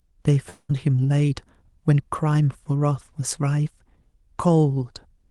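From 0.49 to 0.71 s a likely long network dropout stopped audio arriving; the receiver smeared the last sound into a fading buzz, then 40 ms of silence.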